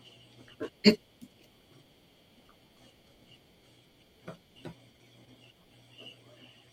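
At 3.0 s the speech jumbles for half a second, and it happens again from 4.75 to 5.25 s. Both are chunks out of order. The audio is moving in 250 ms chunks, and in each spot one chunk came in one slot late, so it plays after the one that should follow it. Nothing goes missing, but the swapped pair leaves three hard joins, so you get a scrambled moment.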